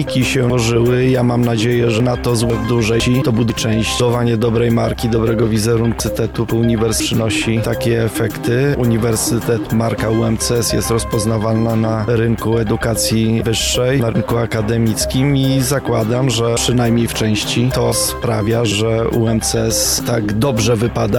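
Jumbled moments at 0.5–2.5 s, 3.0–4.0 s and 6.0–7.0 s are chunks out of order: half-second blocks arrive late, first by three chunks, then by one, and play after their successors.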